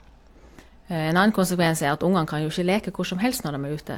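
Nothing here calls for comment: the speech runs without any audible technical trouble.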